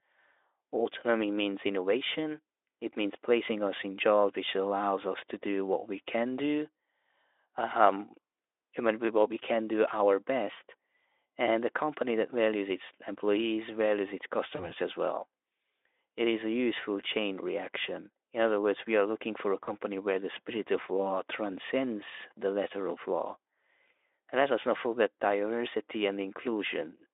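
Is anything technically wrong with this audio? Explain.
Yes. VoIP packet loss concealed by the speech codec occurs twice, around 40 ms of missing audio each time (consistent with two 20 ms frames): at 14.55 to 14.73 s, after "its employees values its" and before "as well", and at 19.63 to 19.71 s, between "are looking for a" and "where the spirit of". The decoder keeps repeating its last pitch and spectral shape at falling gain, so the speech smears into a brief buzzy tone or coloured noise that fades and stays weakened after packets resume, rather than dropping to silence or clicking.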